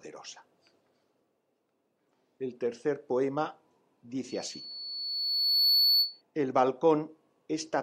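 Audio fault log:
4.29–6.22 s loudspeaker feedback squeal: a lone 4.4 kHz tone swells over about a second and a half to roughly 5 dB above the sound, because microphone-to-speaker loop gain exceeds one there. A spectrogram shows a bright horizontal line, the waveform a steadily growing envelope.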